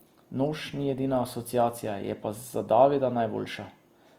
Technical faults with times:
0.00-4.18 Opus compression

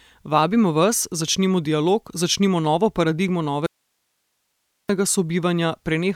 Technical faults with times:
3.66-4.89 audio dropout to a faint residue

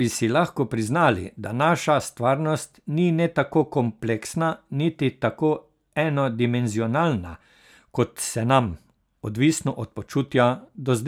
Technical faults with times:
none

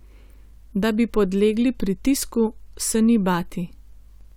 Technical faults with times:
2.10 bit error spike
3.29 bit error spike

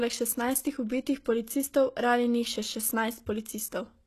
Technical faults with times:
0.00-4.06 HE-AAC compression

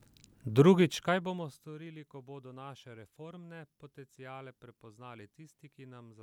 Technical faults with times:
none

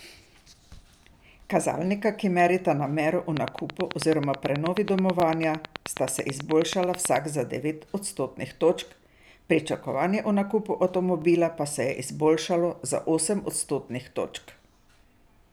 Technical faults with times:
3.37-7.17 train of clicks
5.20-5.22 overlapping chunks
11.22 overlapping chunks

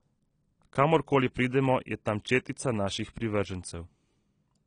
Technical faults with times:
0.00-4.67 AAC compression

